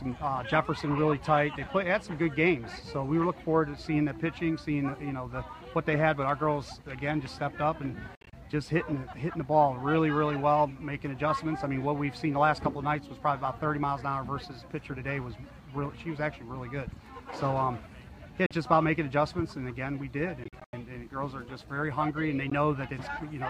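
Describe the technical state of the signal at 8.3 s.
Around 8.3 s the sound breaks into short silent gaps between 8.15 and 8.33 s, about 116 ms missing in total, the longest single hole 58 ms, each gap cut off and resuming as if playback had continued. This is a Bluetooth dropout, likely late wireless packets being discarded.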